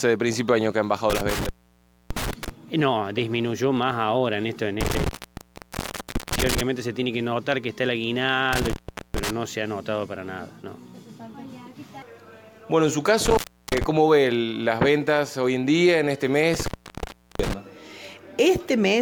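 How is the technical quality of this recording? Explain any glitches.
The recording suffers from repeated dropouts. Intermittent contact at 1.10–2.49, 4.81–6.61, 8.53–9.30, 13.25–13.84 and 16.54–17.54 s: a loose connection opens for about 0.62, 1.23, 0.41, 0.35 and 0.72 s, cutting the sound out with crackle at the edges and faint hiss during each gap.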